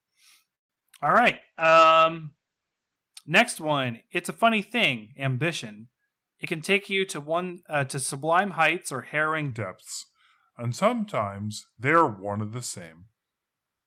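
Between 0.55 and 0.95 s, repeated packet loss (robotic sound) sets in: audio packets went missing or arrived too late, four times in quick succession. The receiver covered each hole by stretching the last sound it had, about 157 ms in all, and 80 ms is simply gone. The longest gap is 141 ms, and concealment accounts for about 40 percent of the stretch. The result is choppy, with pieces dropping out.

From 1.05 to 3.04 s there is a call bitrate drop. The sender's bandwidth estimate collapsed and the encoder was forced to spend far fewer bits, which fits a fall from around 32 kbps to around 11 kbps, held at its lowest for about 1.86 s. At that rate the codec also discards everything above 8 kHz, where the audio previously reached 20 kHz. The sound turns dull, muffled and watery until the bitrate climbs back.

Overlapping that, from 1.22 to 1.94 s, a jitter buffer slow-down occurs. The receiver's buffer was running short of audio, so it rebuilt a reserve by repeating individual pitch periods over and over, adding 67 ms in total. 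Playback runs at 92 percent speed with the pitch unchanged. The sound is drawn out and sluggish.

From 6.45 to 8.17 s the opposite happens, a jitter buffer speed-up. Too much audio had piled up in the buffer, so the receiver shortened its backlog by cutting out short slices of one or a few pitch periods, repeatedly, about 150 ms in all. Playback runs at 108 percent speed while the pitch holds steady. The audio sounds hurried.

From 9.51 s to the end, the section at the wrong speed plays at 0.861 times its original rate, most likely because this part was played back against the wrong clock. Speed and pitch change together at the boundary: the sound drops roughly three semitones and slows down, becoming noticeably deeper and more drawn out than the material before it.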